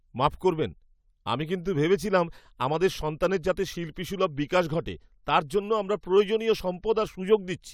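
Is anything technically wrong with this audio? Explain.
No, nothing technically wrong can be heard in this audio. The speech comes through without any audible technical fault.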